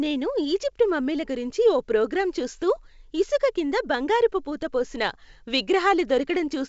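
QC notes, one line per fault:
Nothing to flag here: the speech comes through G.722 wideband telephone coding at what sounds like the full 64 kbit/s rate, with the band topping out around 7.7 kHz as that path would have it.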